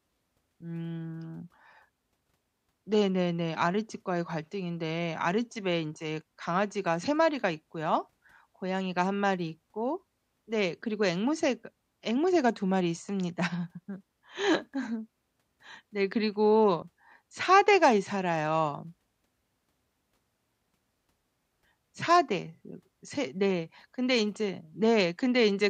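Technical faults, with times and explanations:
No technical faults can be heard anywhere in this speech recording, and the signal holds steady from its opening to its close.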